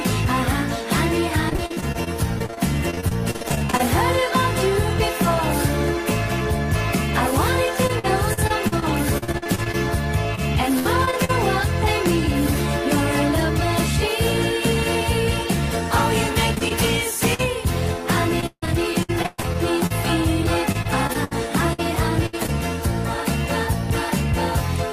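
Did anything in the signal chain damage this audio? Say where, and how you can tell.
Yes. Repeated packet loss (robotic sound) at the network stage hits three stretches: 1.49 to 3.81 s, 7.87 to 11.31 s and 16.55 to 22.5 s. Frequent short holes, the longest about 44, 60 and 157 ms, are patched by extending the previous sound, giving a choppy texture. On a spectrogram, smeared, frozen harmonic bands repeat where detail should change. On the waveform, periodic segments repeat at each gap. Concealment covers roughly a quarter, a sixth and a seventh of each stretch.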